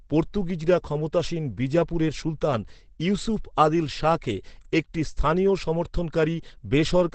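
From start to finish the speech sounds muffled and hoarse, with a dull top and heavy roughness. That points to Opus compression, likely in its SILK speech mode at a rate near 12 kbps, with the band cut to wideband, roughly 8 kHz.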